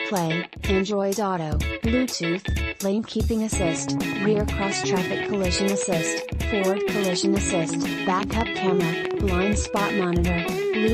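At 5.83 to 5.85 s a single loud pop sits just above the level of the sound. From 8.23 to 8.43 s two pops in quick succession stand out well above it, and at 9.05 to 9.13 s another close pair is clearly louder than the surrounding audio. Each is a sharp thump layered over the sound, which carries on underneath. The likely cause is a brief voltage step or pulse, from a plug, switch, static discharge or driver glitch, entering the signal chain.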